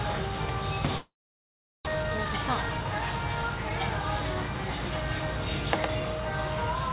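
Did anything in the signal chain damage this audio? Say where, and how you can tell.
Yes. Long network dropout, 0.98 to 1.89 s, at the network stage: the last sound smears into a fading buzz and then gives way to about 0.75 s of near-silence. When the audio resumes, roughly 0.6 s of material is missing, most likely packets lost in transit.

Jitter buffer speed-up, 1.97 to 3.79 s, at the buffer stage: the audio runs about 14% fast at unchanged pitch and sounds hurried. The receiver trimmed short pitch-period slices repeatedly, removing around 0.3 s to drain the delay built up after the dropout.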